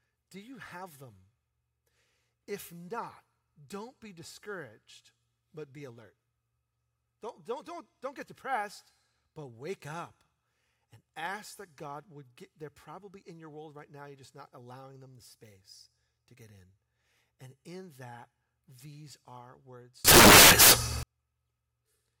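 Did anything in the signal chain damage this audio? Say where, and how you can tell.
Yes. From 20.05 to 21.03 s the speech is replaced by loud, harsh broadband noise: samples built from the wrong bytes, a fault at the sample-format conversion stage. The reader assembled each sample from misaligned or misordered bytes, so the rapidly varying low-order bits became the dominant part of every value.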